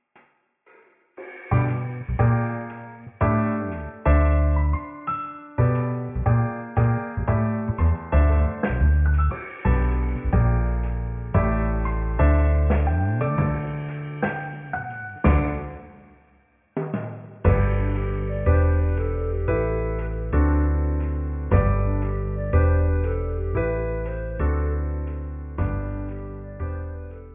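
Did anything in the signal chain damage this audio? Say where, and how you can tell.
No, nothing along the chain leaves a mark I can hear anywhere in this audio, so there's no stage to point to.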